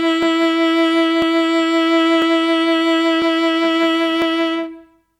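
From 0.23 s to 4.22 s the music carries periodic USB or driver dropouts: a tick once every 1.0 s, about five in all. Each marks a sub-millisecond slice of audio skipped outright, likely from a background task briefly stalling the audio driver.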